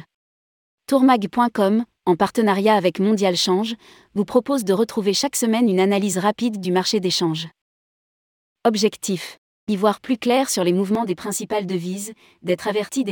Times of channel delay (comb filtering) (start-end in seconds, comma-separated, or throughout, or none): 10.95-13.12